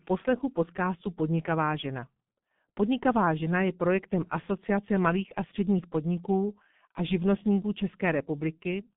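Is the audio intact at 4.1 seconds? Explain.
No. G.723.1 codec damage runs through the whole clip, 4.1 s included: a low-bitrate vocoder limited to 150 Hz–3.6 kHz, with slowly updated frames that leave the speech muffled, hoarse and consonant-blurred.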